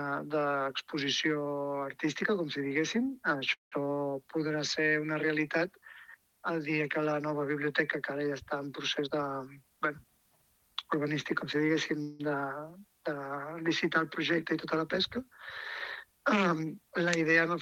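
The audio has two call audio freezes, likely from delayed packets emptying the jitter buffer: at 3.53 to 3.83 s and 12.02 to 12.21 s the sound stretches into a fading buzz for about 180 ms, the first trailing into silence, then resumes where it stopped. A jitter buffer speed-up from 9.03 to 10.27 s trims repeated pitch-period slices, removing about a fifth of a second, so the audio runs 14 percent faster at unchanged pitch and sounds hurried.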